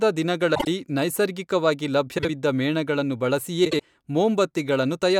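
Speech, with three spots where frames are out of order: 0.55–0.67 s, 2.18–2.30 s and 3.65–3.81 s. Each is a brief garbled flutter where two adjacent chunks play swapped, roughly 48 ms each for the first two and 72 ms for the last, with no time lost.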